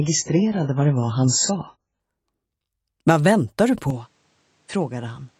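For the first 2.0 seconds, the sound is band-limited and smeared. Nothing is present above 7.6 kHz, and codec artefacts are strong. This is an adaptive stream starting at a low bitrate. The player began on a cheap version of the stream to start fast. The thin, artefact-laden sound fits AAC at about 12 kbit/s. At 2.0 s the quality jumps up with no gap. That points to a step up to around 96 kbit/s.

At 3.90 s the tone changes abruptly and stays changed to the end. The top end now stops at 9.2 kHz, so the sound turns duller. The level falls by roughly 5 dB. A new noise floor appears, about 40 dB below the signal. There is no silence at the change. The likely cause is an input switched to a poorer device, with a narrower band, its own level and its own noise.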